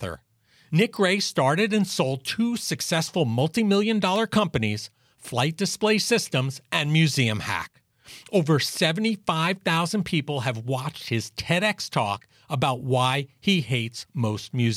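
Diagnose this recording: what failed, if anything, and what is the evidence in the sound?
The failure sits in the analogue wiring: an electrical switching spike at 4.16 s, just after "two successful multi million". It is a sharp snap or tight cluster of clicks laid over the speech, peaking around -20 dBFS. The likely cause is a nearby switch, motor or static discharge arcing briefly, with the audio line picking up the burst. On a waveform it shows as a narrow spike. On a spectrogram it is a thin vertical broadband stripe.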